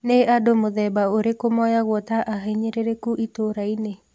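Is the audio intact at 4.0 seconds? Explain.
Yes, at 4.0 seconds the speech is intact, with no dropout, click, distortion or other fault at that moment.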